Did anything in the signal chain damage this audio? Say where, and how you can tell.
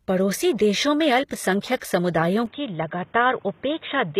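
Yes. Throughout, there's nothing above 14.9 kHz, and the treble has that rebuilt, not-quite-matching quality. That's likely HE-AAC compression at the codec stage, consistent with a low bitrate around 20 kbps. The top is copied up from lower bands, so harmonics don't line up across the crossover.

There's also pre-echo, another codec-stage artefact, at 1.77 to 1.82 s. A short hiss smears about 48 ms ahead of an attack. The codec spread its quantisation noise across the whole block, so the quiet moment before the transient gets filled too.

From 2.46 s to the end, the band suddenly stops at 3.8 kHz, the level drops by about 5 dB, and a new noise floor appears roughly 30 dB below the signal. There's no gap at the changeover. That points to the input likely being switched to a poorer device at the capture stage.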